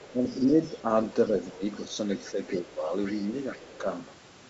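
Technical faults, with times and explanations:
0.00–0.69 s, 1.75–1.81 s, 2.12–2.59 s, 3.04–3.78 s: other side's voice leaking through. A second voice sits underneath, mostly about 20 dB down and fainter still around 1.8 s. It's likely loudspeaker echo the canceller didn't fully strip from the mic.
0.13–0.86 s, 1.52–1.94 s, 2.31–2.92 s, 3.52–3.84 s: speech suppressed in double talk. The main talker dips by roughly 5 to 10 dB in short patches. Both sides were talking at once, so the canceller likely couldn't tell them apart and pulled both down.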